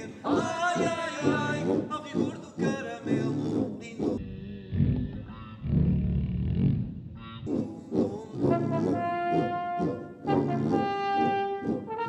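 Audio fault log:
4.18–7.47 s, stereo read as mono: for this stretch the left and right samples, which alternate in the stream, are being taken one after the other as if they were a single channel. Every stereo frame then supplies two consecutive mono samples, so the audio runs at 0.5x speed and sits a full octave (12 semitones) lower. The interleaving also leaves a fainter mirrored copy of the sound in the upper half of the spectrum.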